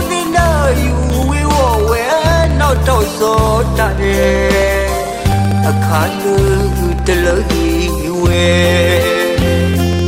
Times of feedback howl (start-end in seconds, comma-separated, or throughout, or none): none